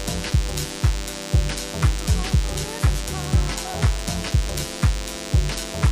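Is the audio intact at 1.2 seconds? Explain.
No. A DECT cordless phone buzz runs through the whole clip, including 1.2 s. A nearby DECT handset or base station transmits a brief radio burst every 10 ms, and the audio circuitry rectifies that energy into the signal path. The result is a thin, steady buzz with a 100 Hz fundamental and a dense stack of harmonics, sitting roughly 15 dB below the main sound and audible beneath it at that moment.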